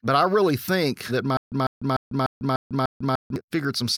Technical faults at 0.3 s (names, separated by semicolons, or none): none